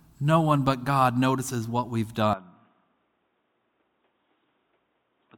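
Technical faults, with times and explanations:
2.33 s to the end, input switched to a poorer device: with no gap at the change, the speech suddenly turns dull and boxy, drops around 10 dB in level, and picks up a faint new background noise well below the voice. This is likely a switch to a lower-grade microphone or headset call profile. On a spectrogram, energy above 3.8 kHz vanishes from that point onward; the waveform's envelope visibly shrinks at the switch.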